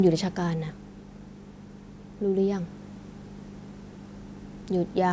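From 0.05 s to 1.05 s the speech shows automatic gain falling. The automatic gain control judged the incoming level too high, or its background noise too strong, and pulled its gain down gradually, by about 5 dB over that second. The opening therefore starts loud and then sinks steadily, and the background noise drops along with the speech, which marks it as a gain change rather than a change in how the talker speaks. The band is limited to 8 kHz, consistent with call microphone processing.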